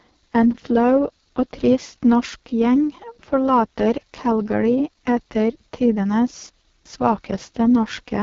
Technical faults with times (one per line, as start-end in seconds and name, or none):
0.00-8.22 AMR wideband (HD Voice) codec